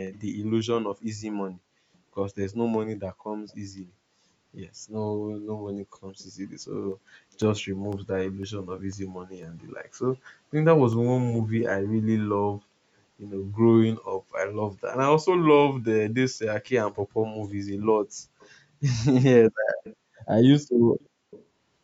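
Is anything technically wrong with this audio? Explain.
Yes. Two kinds of fault can be heard.

Brief echo leak occurs at 0.13, 3.49, 18.4, 19.84, 21.0 and 21.31 s. A faint copy of the speech returns 351 ms late. It sits well below the main speech and is very faint at 3.49 s. The likely cause is a far-end loudspeaker whose echo canceller let some sound through.

Periodic USB or driver dropouts run from 6.92 to 10.93 s. Every 0.5 s, about half a millisecond of audio drops to silence. That is about ten small gaps. They are heard as evenly spaced ticks during the speech.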